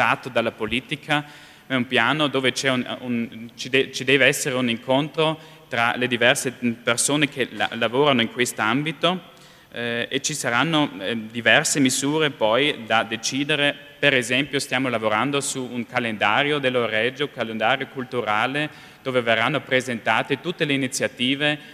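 Nothing in this audio stood out as a technical problem on listening.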